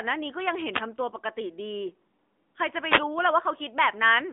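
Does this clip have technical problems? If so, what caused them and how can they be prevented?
Yes. The speech carries AMR narrowband mobile codec damage throughout. Nothing passes above 3.7 kHz, and the line band runs about 250 Hz to 3.6 kHz. The low-bit vocal-tract model makes the voice audibly buzzy, which fits roughly 10.2 kbps. Record or route the call over a wideband path instead of a 2G/3G narrowband link.

Two wireless microphone noise hits occur, at 0.72–0.83 s and 2.86–3.04 s. The radio signal faded as reflections cancelled, so receiver noise swished up over the voice. Use diversity receivers and keep clear line of sight between transmitter and antennas.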